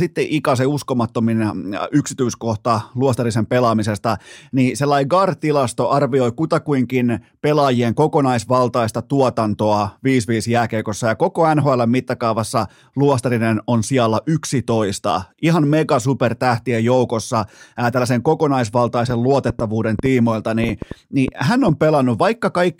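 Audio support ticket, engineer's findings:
Train of clicks, 19.10–21.70 s. Likely external interference or a faulty connection or power supply injecting repeated pulses. Around ten similar clicks at an uneven ~3.9 per second, peaking about 10 dB above the speech, audible as popping over it and through pauses.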